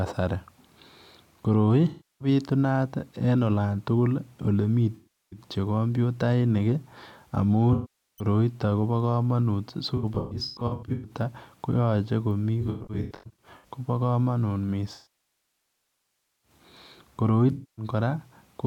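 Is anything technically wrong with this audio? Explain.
Yes. The speech has AAC frame loss with concealment at 1.88–2.28, 4.95–5.40 (after "tukul ole"), 7.73–8.25, 9.96–11.11 (before "koyache komii"), 12.61–13.68 (after "koyache komii"), 14.94–16.51 and 17.52–17.85 s. Missing frames were filled from the last good spectrum. Short gaps sound smeared and phasey. The two scattered patches flicker in brief bursts. The 1.5 s loss decays toward silence, then fades back.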